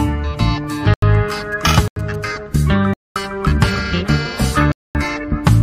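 The audio drops to digital silence four times, at 0.94 to 1.02 s, 1.88 to 1.96 s, 2.94 to 3.16 s and 4.72 to 4.95 s. The first two 85 ms holes fit an unfilled 4096-sample output buffer. From 1.29 to 2.25 s, GSM signalling bursts from a nearby 2G phone add a faint galloping dit-dit-dit of short 217 Hz buzzes, well below the main signal.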